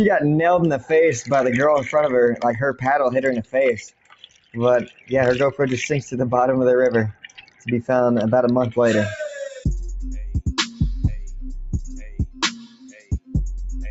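From the start, a noise suppressor built for speech is applied to this sound. It treats steady tone, ambience and decay as noise and pulls them down. Level swings by roughly 15 dB as it engages and releases. Onsets get through. Sustained parts and tails sink. The result pumps and thins out. The top end stops near 8 kHz, as the call path normally does.

Then come individual cuts, where the suppressor turns some sound down further than the rest. They fall at 0.77 to 0.92 s, dropping about 15 dB, and at 2.35 to 2.86 s, about 18 dB. Next is 3.39 to 3.56 s, about 19 dB, then 3.75 to 4.58 s, about 20 dB. After that come 4.84 to 5.12 s, about 17 dB, and 7.12 to 7.68 s, about 19 dB. The last is 12.33 to 13.35 s, about 20 dB. Each time, held or fading sound sags or its decay is cut short.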